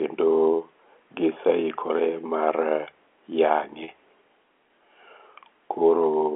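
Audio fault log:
3.84 to 3.88 s, packet loss with pitch repetition: a 40 ms gap, which fits two lost packets. The last pitch period repeats, giving a brief held buzz.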